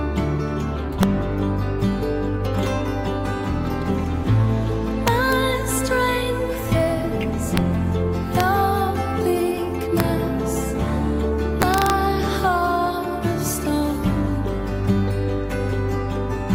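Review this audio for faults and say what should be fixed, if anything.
A gain or summing stage is overflowing its integer range: peaks pushed only about 1 dB past full scale (about 0 dB at 7.57 s) wrap to the opposite sign instead of being held at the limit. Each wrap throws the waveform across the full range, so loud moments produce violent cracks, far harsher than clipping. This integer overflow strikes at 1.03 s, 5.08 to 5.33 s, 7.57 s, 8.40 s, 10.00 s and 11.62 to 11.90 s. Saturating arithmetic or a limiter ahead of the integer conversion would clamp these peaks instead of letting them wrap.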